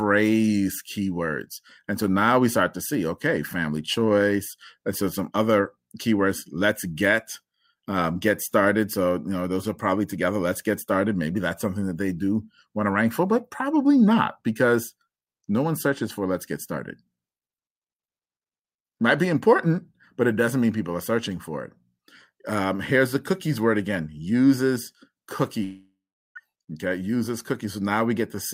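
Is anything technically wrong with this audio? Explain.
Yes. A long network dropout runs from 25.63 to 26.38 s in this speech clip. The gap is likely caused by a stretch of packets failing to arrive, leaving about 720 ms of audio that is never played. The receiver stretches the last sound it had into a fading buzz, and after that only about 380 ms of near-silence remains. The speech then resumes with the missing portion simply gone.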